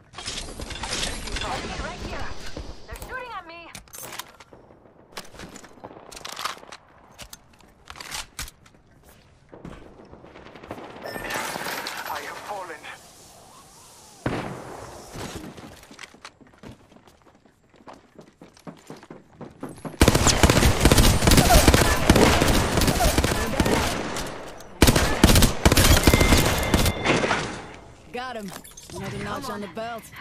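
From 22.41 to 26.91 s a doubled audio track appears: a second copy of the sound runs about one and a half seconds behind the original, a few decibels quieter, with no decay or room colour, and it cuts in and out abruptly. The likely cause is a slower capture path or an edit holding two misaligned copies. A spectrogram shows the same full-band patterns repeated, shifted right, with hard edges where the copy begins and ends.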